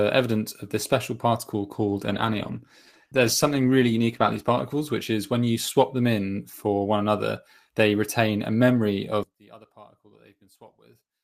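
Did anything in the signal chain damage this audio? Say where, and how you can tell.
Yes, at two stages. A call bitrate drop sits in the network and codec path from 1.8 s to 5.25 s, starting just after "of this special particle" and clearing by "when you swap them". The audio turns coarse and watery, with the top end dulled for about 2.6 s at its worst. That fits the call's bandwidth estimate collapsing and the encoder being pushed from roughly 32 kbps down to 16 kbps, where it codes coarsely and trims high frequencies until the rate recovers.

From 9.23 s, right after "they retain a memory", to the end of the clip, the level falls by about 26 dB and what remains sounds like a faint ghost of the centred sound. That behaviour points to the wiring or channel-mapping stage, with one channel inverted as the likely cause. With one channel's polarity reversed, everything common to left and right cancels when the pair is summed to mono, leaving only their small difference audible.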